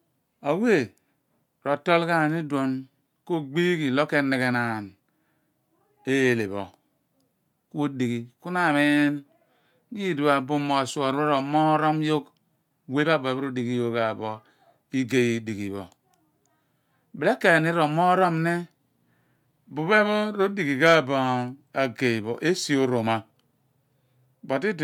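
A speech recording with nothing technically wrong with it.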